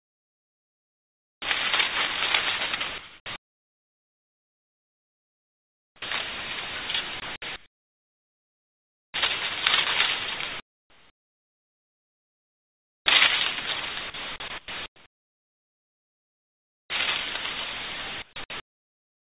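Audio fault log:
0.00–1.42 s and 10.60–13.06 s, sound dropped by the voice detector: the sound disappears under steady, flat hiss for 1.42 s, then 2.46 s. The likely cause is the sender's voice detector treating the sound as background and stopping transmission, with the receiver filling the gap with comfort noise.
2.98–6.02 s, 7.20–9.14 s, 14.10–16.90 s and 18.22–19.29 s, sound chopped by the voice detector: the sound turns choppy, with stretches (about 2.9 s, 1.7 s, 2.2 s and 0.9 s in total) swapped for synthetic hiss. This is likely the voice detector switching on and off repeatedly. The band-limited quality of the call path, with nothing above 4 kHz, is audible across these stretches too.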